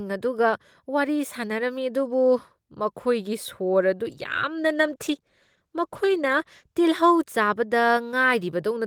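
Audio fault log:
4.04–6.83 s, call bitrate drop: for about 2.7 s the speech turns rough and watery, with the upper frequencies cut away. The encoder coded more coarsely after the call's bandwidth estimate fell, which fits a cut from around 32 kbps to about 13 kbps.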